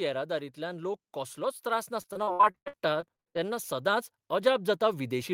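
From 0.27 s to the end of the clip, an automatic gain rise takes hold. The gain control judged the incoming level too low and began lifting its amplification step by step rather than all at once. Because the boost applies to everything the microphone picks up, the speech and the background noise swell together, growing steadily louder across roughly five seconds instead of settling at a fixed level.

Between 2.01 s and 3.41 s, repeated packet loss produces a robotic sound. Audio data kept failing to arrive in time, and each hole was covered by extending the last sound received before the next gap arrived. Over this stretch of about 1.4 s, more than a dozen short dropouts follow one another, the longest lasting 78 ms. Roughly a third of the span, close to half a second in total, is patched rather than real speech. The result is choppy, robotic speech with fragments missing.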